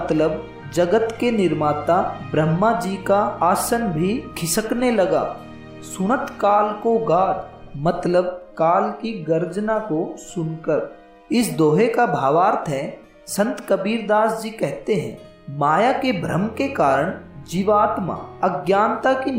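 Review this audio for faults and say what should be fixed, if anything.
At 10.77 s there are compressed frames skipped: the audio jumps forward by about one frame, roughly 20 ms of material, which fits a codec using 20 ms frames. That frame was either missing from the stream or rejected by the decoder as corrupt, so playback resumed at the next good frame. To prevent it, verify the file's integrity after encoding and transfer, and re-encode or re-copy it from a clean source so every frame decodes.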